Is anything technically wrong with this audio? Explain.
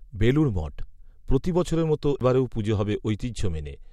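Yes. At 2.20 s the speech ticks, drops out for a very brief instant and resumes from a different point, a jump in the playback position. This is a CD skip: a knock or disc flaw threw the laser onto another turn of the spiral, so the player muted briefly and carried on from there.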